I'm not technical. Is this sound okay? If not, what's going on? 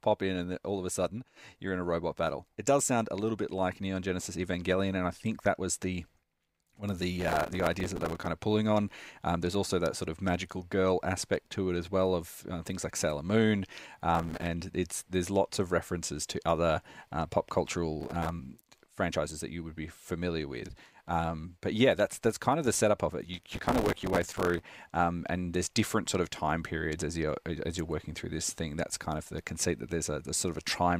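No. Processor overload crackle hits the speech at 7.18–8.27 s, 14.15–14.49 s (just before "it's there's lots of"), 18.00–18.29 s (after "to other uh pop") and 23.34–24.63 s (between "the setup of it" and "um and there's different"). The computer couldn't keep up, so many tiny chunks of audio, each a few milliseconds long, were replaced by stale leftovers. The rough, gritty tearing lasts until the strain passes.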